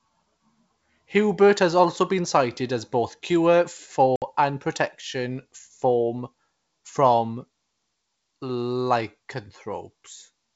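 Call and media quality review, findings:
Packet loss on ADPCM call, 4.16–4.23 s, between "cited as both cure" and "and protection". Hard silent gap, 60 ms, a few packets. Decoder predictor and step size desynced; resumes slightly distorted.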